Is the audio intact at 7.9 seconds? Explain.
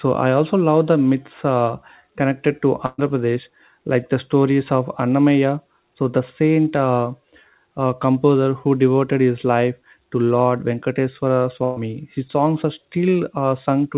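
Yes, the speech at 7.9 seconds is intact, carried through the call path with its narrowband telephone sound and nothing above 4 kHz, and no fault affects it there.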